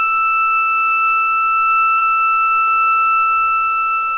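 At 1.98 to 2.03 s a brief smear breaks the sound, a moment where it wobbles and then blends back. This is short concealed packet loss: about 40 ms arrived too late, and the receiver improvised roughly 33 ms by extending the preceding audio before rejoining it. Nothing reaches above 4 kHz, which fits a narrowband G.711 call codec.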